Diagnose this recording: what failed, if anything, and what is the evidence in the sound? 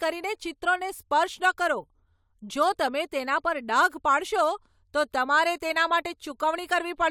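Listening through the speech, nothing stood out that would point to a failure at any stage of the chain.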